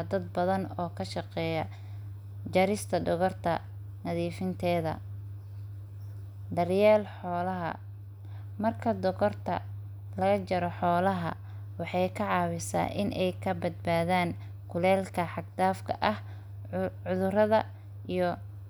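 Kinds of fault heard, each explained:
Nothing stood out on listening to the speech.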